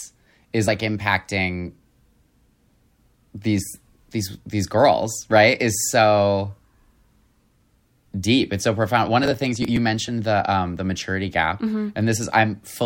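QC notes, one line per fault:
0.67 s, 8.11 s (just before "deep it's so profound"), 10.07 s (just before "the um the maturity"): compressed frames skipped. At each point a single frame of about 26.1 ms is missing from playback, either absent from the stream or rejected by the decoder as corrupt, so the sound jumps forward by roughly 30 ms. The codec's overlapping frames blend across the gap, so each join is a short smeared blip rather than a sharp click.
9.24–9.77 s (just after "it's so profound one"): processor overload crackle. For about half a second the processing could not keep up and repeatedly missed its buffer deadlines. The pattern fits buffers of around 10 ms, with something like ten of them dropped. Each miss skips a slice of audio and leaves hard edges, and the run of these produces a gritty, tearing crackle over the speech that stops once the load clears.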